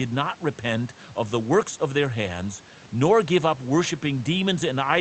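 No technical faults are audible.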